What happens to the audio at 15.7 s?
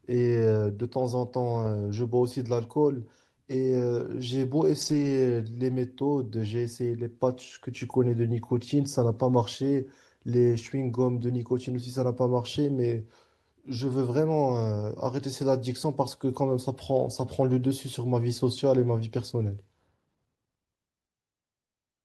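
Nothing goes wrong at 15.7 s: the speech carries straight through that point with no dropout, click, distortion or other fault.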